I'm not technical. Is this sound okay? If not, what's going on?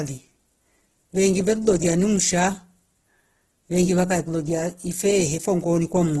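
No. For the whole clip, the speech has a rough, grainy texture, and there is no sound at all above about 12.1 kHz, so the crisp top edge of consonants is cut off. This is likely heavy Opus compression at a low data rate. When the encoder runs short of data, it fills in missing detail with copied or noise-like content, so the voice turns gritty and rough instead of clean.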